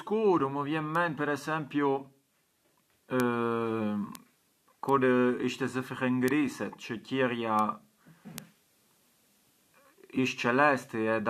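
Seven bit error spikes occur in the speech, at 0.95, 3.20, 4.15, 4.89, 6.28, 7.59 and 8.38 s. Each is a single flipped bit in the digital data, which throws one sample (two consecutive samples at 7.59 s) to a wrong value offset by a power of two before it snaps straight back. The result is a brief, sharp tick with broadband energy, unrelated to the speech around it.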